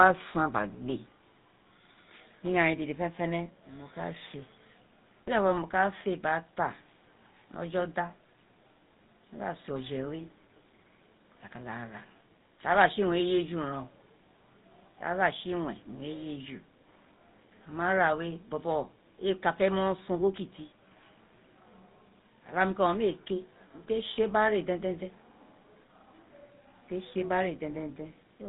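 From start to finish the speech carries GSM full-rate codec damage, plainly audible. Nothing survives above 3.8 kHz, and under that ceiling the voice has a buzzy, gravelly grain. The coder rebuilt the sound from a vocal-tract model fed by a sparse, regular pulse train, which fits the 13 kbps full-rate coder. That roughness sets it apart from simple narrowband filtering or G.711 telephony, which dull the top but leave the remaining sound smooth.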